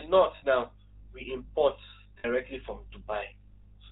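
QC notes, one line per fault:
throughout, GSM full-rate codec: the speech is plainly buzzy and gravelly because the codec rebuilds it from a vocal-tract model driven by a sparse, regularly spaced pulse train, discarding most of the excitation detail, and nothing above 4 kHz survives, at a rate that fits 13 kbps.
0.36 to 0.44 s and 2.18 to 2.25 s, lost GSM frames: in each gap about 60 ms of speech is missing, which fits three dropped frames, and the decoder fills it by repeating the last good frame's settings, giving a brief rough, metallic ringing hold.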